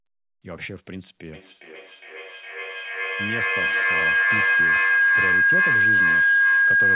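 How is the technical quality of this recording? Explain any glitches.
Poor: a feedback howl takes over the speech. From 1.33 s to the end, a microphone-to-loudspeaker loop gains level on each pass, with repeats roughly every 0.4 s, building a tone around 1.5 kHz that peaks about 13 dB above the speech. The speech itself stops at 4 kHz, which fits a narrowband telephone codec.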